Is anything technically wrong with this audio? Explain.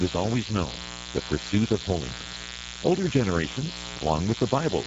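Yes. Throughout the clip a steady, raspy mains buzz sits fairly loud under the speech, built on 60 Hz harmonics from switching spikes leaking in twice per mains cycle.

Also throughout, the speech sounds noisy and hoarse, with nothing above 7.7 kHz. This is Speex codec damage: at a low rate, around 10 kbps, the CELP coder has too few bits for the excitation.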